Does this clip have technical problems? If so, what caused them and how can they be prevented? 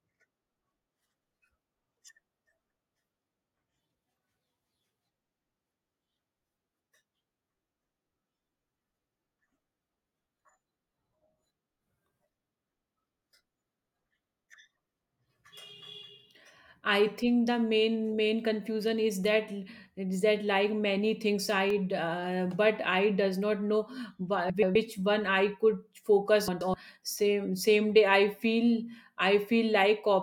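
Yes. There are frames out of order at 6.67–6.93 s, 24.50–24.76 s (just before "one I") and 26.48–26.74 s. In each spot, two adjacent 128 ms blocks got swapped and decoded in that order, so the speech briefly flutters and garbles. Tagging packets with sequence numbers and having the receiver reorder them before decoding would prevent this.

There are also two short blocks of digital silence: one at 19.24 s, right after "main main confusion is" and lasting about 1.6 ms, and one at 21.70 s after "that like many things", lasting 0.67 ms, which fits a 32-sample block. The output buffer likely wasn't filled in time, so the signal dropped straight to zero and back, and each one comes through as a tick. A bigger output buffer or a higher-priority audio thread would keep it fed.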